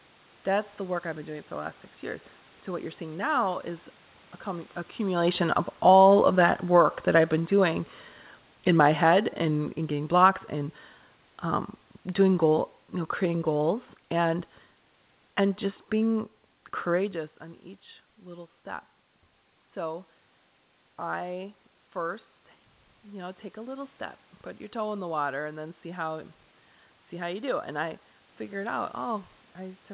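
Automatic gain falling spans 5.72 s, after "accumulation of", to 17.15 s, before "on each little step". The gain control judged the input too loud, or its background noise too strong, and lowered its gain by about 9 dB, so the speech and room noise sink together.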